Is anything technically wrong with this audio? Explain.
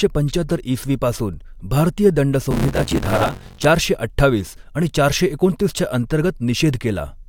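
Yes. From 2.51 to 3.65 s, after "ईसवी पासून भारतीय दंड" and before "चारशे अठ्ठावीस आणि चारशे", there is buffer tearing. The writing program and the playback hardware have drifted out of step. Their positions now cross within each buffer period. About 40 percent of each buffer holds audio roughly 20 ms stale, with hard joins on both edges. The speech gets a robotic buzz at 93.8 Hz, which fits a 512-sample buffer.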